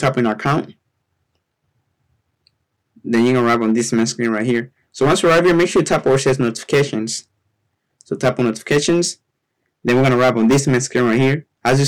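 Throughout, a stage is overdriven by about 14 dB, so hard clipping flattens roughly 7 percent of samples, adding harsh fuzz to loud sounds.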